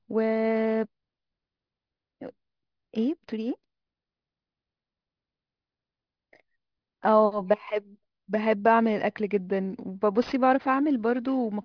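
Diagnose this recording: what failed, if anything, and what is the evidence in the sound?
Aliasing runs throughout the speech, from start to finish, introduced at a sample-rate conversion stage. Sibilants sound gritty and metallic, and the spectrum runs hard up to 5.5 kHz, which fits resampling to about 11 kHz without an anti-alias filter. Content above that edge folds back as false tones roughly 30 dB below the signal.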